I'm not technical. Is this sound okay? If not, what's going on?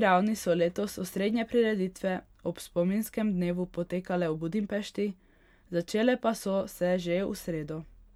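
Yes, no faults can be heard.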